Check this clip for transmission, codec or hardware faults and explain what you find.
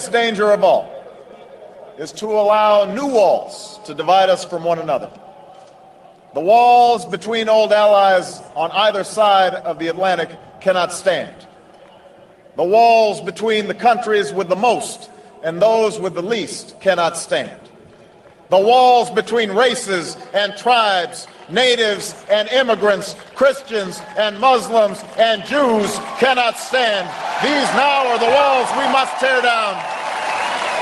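Two call bitrate drops are audible. The call's bandwidth estimate fell, forcing the encoder to code more coarsely and trim the highs, so the sound turns rough and muffled. The first runs from 2.05 to 3.87 s, at its worst for about 1.0 s, and the dullness suggests a fall from roughly 32 to 15 kbps. The second runs from 21.86 to 27.61 s, degraded for about 5.7 s, and is consistent with a drop to around 17 kbps before clarity returns.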